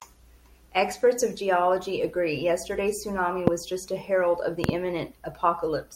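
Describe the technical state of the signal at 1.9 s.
At 1.9 s the speech signal is intact, with no audible fault at that point.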